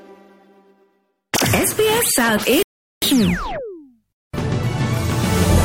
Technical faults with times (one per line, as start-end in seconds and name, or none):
2.63-3.02 rebuffering stall